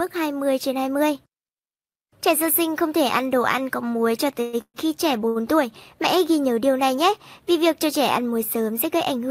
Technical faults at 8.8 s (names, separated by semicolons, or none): none